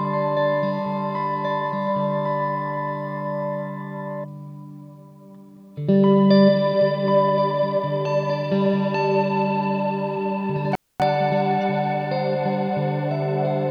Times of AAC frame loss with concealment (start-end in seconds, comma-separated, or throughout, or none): none